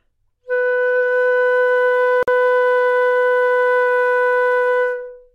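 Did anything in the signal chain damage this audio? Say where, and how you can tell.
Yes, at the codec stage: a gap at a join of encoded pieces, a 49 ms silence from 2.23 to 2.28 s, where separately encoded segments were spliced with their padding left in.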